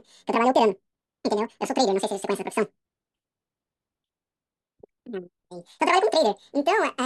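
Audio read two samples at a time (double speed) affects the whole clip, from start to finish. The reader grouped each pair of samples into a single frame, as if the stream held two channels or samples twice as wide, so it moves through the data twice as fast. The speech plays at 2x speed and 12 semitones, a full octave, higher.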